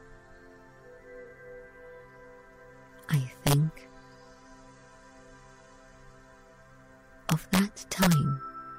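A brief smeared, phasey patch at 1.25 s, and again at 4.79 s, is AAC frame loss with concealment. Each gap of about 43 ms points to a single missing frame, which the decoder filled by reusing the previous spectrum with scrambled phase. From 3.14 to 3.53 s, and more heavily from 7.30 to 8.13 s, violent cracks break out on the loudest peaks. This is integer overflow: with the signal pushed about 1 dB and then about 3 dB past full scale, samples wrapped to the opposite sign instead of being limited.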